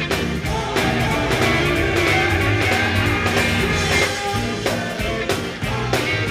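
A doubled audio track runs from 0.83 s to 4.01 s: a second copy of the sound trails the first by about half a second, at roughly the same loudness, so everything is heard twice in quick succession. The copy is full-band and dry, with no decay or room colour, and it cuts in and out abruptly at those times. This likely comes from the signal being captured again through a slower path, or from an edit leaving two misaligned copies.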